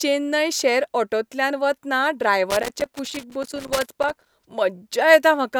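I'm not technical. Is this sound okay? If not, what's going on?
No. From about 2.50 to 4.29 seconds, right after "चेन्नय शॅर ऑटोंतल्यान वतना", the speech is broken up by loose connector crackle: an irregular burst of crackle and scratching lasting nearly two seconds. This comes from a worn or dirty contact in a plug or socket that keeps connecting and disconnecting as it shifts. Each break chops the signal, so the speech sounds torn and noisy during that stretch.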